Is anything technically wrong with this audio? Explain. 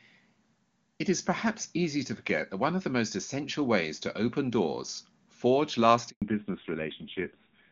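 Yes, two faults. At 6.10 s a handover gap drops the call into 120 ms of silence, ending at 6.22 s. The switch between networks delivered no speech frames, so the speech cuts off abruptly and that stretch is lost. From 6.22 s to the end, a fallback to narrowband leaves the speech with nothing above 4 kHz. The HD Voice wideband path had been clear, but the call dropped to an older narrowband codec, and the rough, dull result points to a low rate around 5.9 kbit/s.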